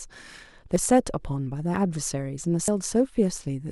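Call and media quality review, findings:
Dropped buffer (overrun) at 0.76 s, 1.76 s, 2.68 s in speech: audible skip-ahead, no silence. Roughly a tenth of a second lost at 0.76 and 2.68 s, a few tens of ms at 1.76 s. Likely capture overrun; unread samples were overwritten, and the edges were spliced. Waveform shows a step discontinuity; spectrogram shows a thin vertical broadband line where formant tracks jump.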